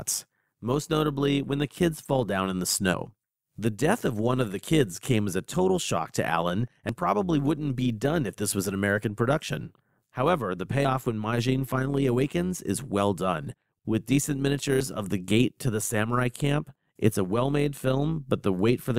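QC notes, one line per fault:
Throughout: overlap-add ripple. The level pulses by about 6 dB at roughly 100 Hz, giving a rough, buzzy flutter. Reassembled frames whose windows don't sum to constant gain cause this. Unlike a dropout or a slow tremolo, the modulation is steady, fast and never stops.
6.89 s and 14.80 s: audio missing between chunks. Each is a sudden skip of about 40 ms, landing just before "probably wouldn't be done" and "of the gate to". The likely cause is material lost at a chunk boundary, then spliced shut. Unlike a dropout, no silence fills the gap; the sound simply jumps ahead.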